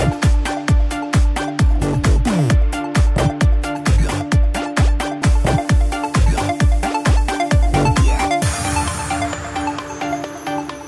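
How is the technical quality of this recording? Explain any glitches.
Good technical quality, with no glitches in this recording to explain.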